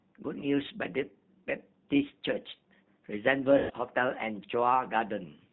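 A speech clip with a narrow, slightly rough, synthetic quality throughout, where nothing above about 4 kHz comes through and the voice has a reconstructed texture. That is the sound of the G.729 codec, which rebuilds each 10 ms frame from a vocal tract filter, a pitch predictor and a handful of pulses rather than the actual waveform, and the roughness here points to the low 8 kbit/s rate. From 3.58 to 3.72 s the voice smears into a stretched sound that sags in level, then sounds weak or distorted as normal audio resumes. This is VoIP packet loss concealed by the speech codec. About 120 ms of audio went missing, consistent with six consecutive lost 20 ms packets. The decoder filled the gap by repeating its last pitch and filter settings at falling gain, and because each frame depends on the one before, recovery lags behind the packets' return.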